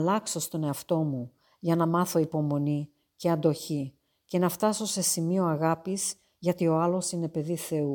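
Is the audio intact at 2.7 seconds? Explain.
Yes, at 2.7 seconds the audio is intact, with no fault to be heard at that moment.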